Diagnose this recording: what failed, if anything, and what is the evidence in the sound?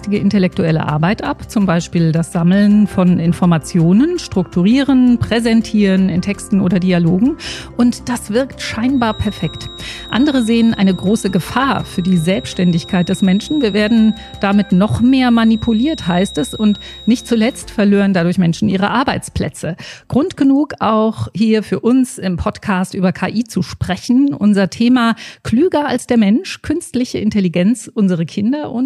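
A feedback whistle, most likely from the acoustic path between loudspeaker and microphone, runs from 8.9 s to 17.67 s: a thin, steady 3.8 kHz tone roughly 20 dB below the sound, swelling and fading slowly in level. The loop gain sits at the edge of oscillation, sustaining one frequency without runaway. A spectrogram would show a lone horizontal line across that span.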